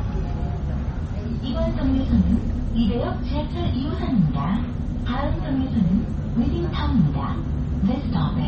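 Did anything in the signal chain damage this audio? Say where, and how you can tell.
Yes. Throughout the clip the sound has a watery, swirling quality, with metallic chirps on bright transients and softened, smeared attacks, and nothing survives above about 8.3 kHz. That fixed ceiling and the flickering texture point to the codec stage, most likely MP3 compression at a very low bitrate around 32 kbps. Starved of bits, the encoder cut the treble outright and dropped weak frequency lines that then switched on and off between frames.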